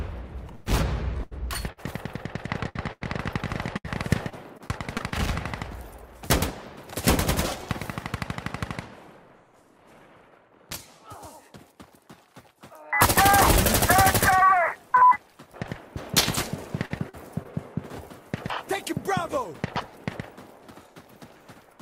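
The audio has bursts of packet loss at 0.55, 2.69, 2.93 and 3.77 s. Each drops 60 to 100 ms, bridged by a fading hold of the preceding sound. Repeated packet loss (robotic sound) occurs at 1.18–1.79, 4.29–5.13 and 16.85–17.47 s. Four or five short holes per stretch give a choppy, patched texture.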